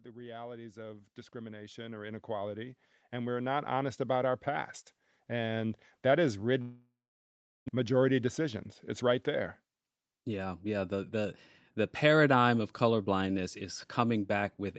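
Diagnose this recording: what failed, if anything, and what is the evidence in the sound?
Automatic gain rising in the call processing stage: from 0.05 to 3.66 s the level climbs by about 16 dB. Voice and background noise swell together, which separates a gain control raising its gain from a speaker simply getting louder.

Long network dropout, likely a network fault: from 6.61 to 7.76 s about a second of audio never arrives. The receiver stretches the last sound into a fading buzz, then about 0.76 s of near-silence follows before sound resumes. A clean edit or mute would have no decaying tail.

Jitter buffer speed-up: from 8.27 to 9.18 s the audio runs about 5% fast, with roughly 50 ms trimmed out as short pitch-period pieces after the backlog from the dropout. Pitch stays unchanged, so this is not a sample-rate mismatch, which would raise the pitch.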